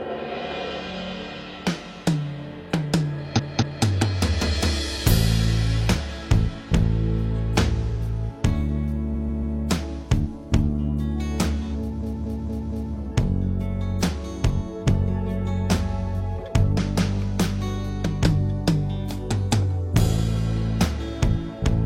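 Repeated frames stutter at 3.35 s, 9.11 s and 11.99 s. Blocks of 232, 139 and 232 ms replay two, three and four extra times, adding 464, 418 and 929 ms. Unlike a dropout, nothing goes missing; the sound lengthens.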